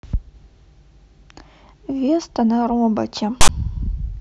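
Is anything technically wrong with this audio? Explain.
Yes. From 3.41 to 3.49 s there are file tags played as audio: a block of text metadata and its zero padding was decoded as samples. The text gives a loud, one-sided rasp, then the padding drops to silence. A plain dropout would only go quiet, without this hard-edged burst first.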